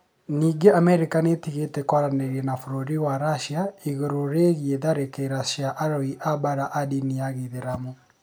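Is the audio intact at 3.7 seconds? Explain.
Yes, the speech at 3.7 seconds plays through cleanly, with no dropout, click, distortion or other audible fault at that moment.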